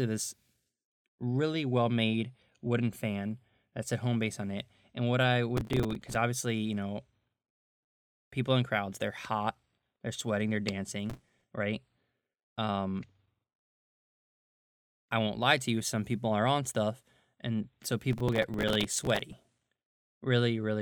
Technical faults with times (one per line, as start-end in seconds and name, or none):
5.57-6.15 processor overload crackle
11.10-11.44 processor overload crackle
18.13-19.38 processor overload crackle